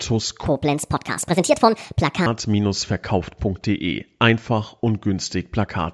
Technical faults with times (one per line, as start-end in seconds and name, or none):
0.46-2.26 wrong sample rate